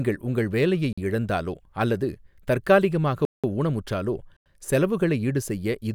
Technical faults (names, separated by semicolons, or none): block of digital silence